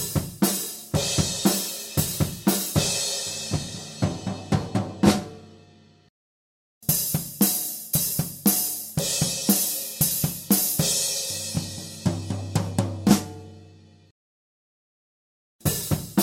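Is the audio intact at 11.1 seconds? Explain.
Yes, the audio is intact at 11.1 seconds, with no dropout, click, distortion or other fault audible at that point.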